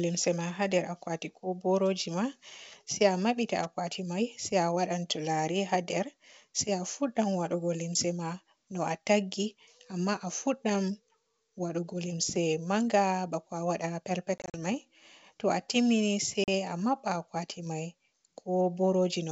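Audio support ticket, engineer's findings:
Packet loss on an ADPCM call, 14.38 to 14.56 s: about 100 ms of hard-edged silence in several short holes across 160 ms, longest 40 ms, roughly a handful of packets. Decoder predictor and step size desynchronised from the sender.

Same fault at 16.44 s, right after "a timmini se": single 40 ms hole, a couple of packets. Resumes slightly distorted and settles within tens of ms, unlike a plain PCM gap, which resumes cleanly. G.722 at 64 kbit/s carries wideband speech around the gaps.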